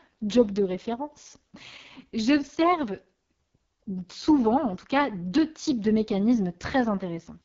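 It's a speech clip run through the AMR wideband (HD Voice) codec for its whole length, and the damage is heavy. The sound is rough and raspy, with nothing above 7 kHz. That harshness points to the lowest AMR-WB rate, around 6.6 kbit/s.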